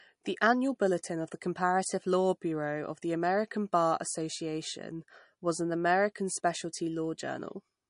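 From start to end, the speech shows MP3 compression damage, likely from a low bitrate near 40 kbps. Nothing sounds above 10.6 kHz. Sibilants turn watery and swirly.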